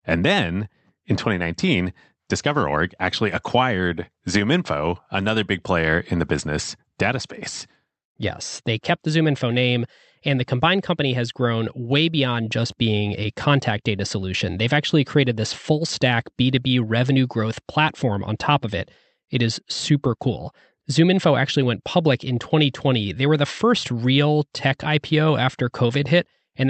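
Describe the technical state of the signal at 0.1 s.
At 0.1 s the speech is intact, with no dropout, click, distortion or other fault at that moment beyond the ordinary character of the call path it travelled through.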